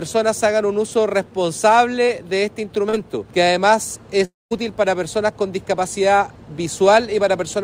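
Two short bursts of packets arrived too late for the decoder, producing short concealed packet loss at 2.05–2.09 s (about 20 ms missing) and 2.89–2.95 s (about 40 ms missing). The receiver patched each gap by extending the preceding sound, so both spots come across as a brief smear or wobble before the real audio blends back in. A longer gap, likely a network dropout, follows at 4.25–4.53 s. About 260 ms of audio never gets played: the last sound is stretched into a fading buzz or hiss, then roughly 190 ms of near-silence remains before the audio resumes further on, with that section missing.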